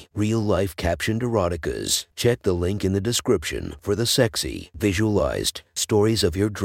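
Nothing technical goes wrong anywhere in this speech recording, so there's no fault to point to at any moment.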